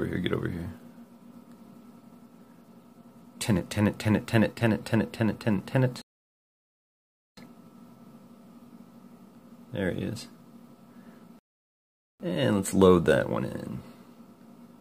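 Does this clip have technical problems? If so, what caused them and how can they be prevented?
Yes. Two rebuffering stalls at 6.02 to 7.37 s and 11.39 to 12.20 s add 1.36 s and 0.81 s of silence. Unlike a dropout, the sound resumes exactly where it stopped, with nothing missing. Buffering more audio ahead of playback prevents this.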